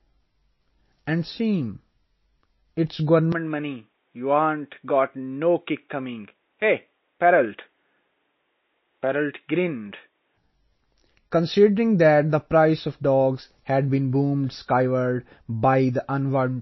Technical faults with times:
0.00-16.62 MP3 compression
3.32-10.37 input switched to a poorer device

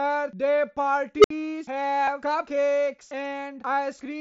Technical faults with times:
1.18-1.30 unstable filter
2.04-2.08 concealed Bluetooth headset packet loss

